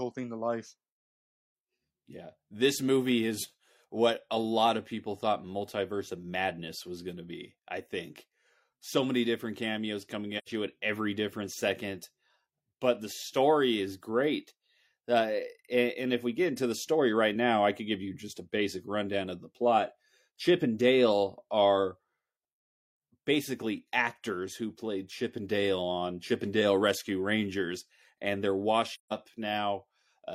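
At 10.38 s, after "many different cameos coming", and 28.94 s, after "and they're", AAC frame loss with muting leaves soft-edged silent gaps of about 85 and 170 ms.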